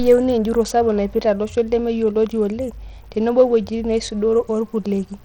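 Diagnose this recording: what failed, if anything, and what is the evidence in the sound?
Bluetooth SBC compression, throughout the speech: the treble is thin and flickers in and out, with a gritty noise and aliasing riding on the sound. This is likely an SBC codec-stage fault, its bit pool starving the upper sub-bands, which fits roughly 80 kbps.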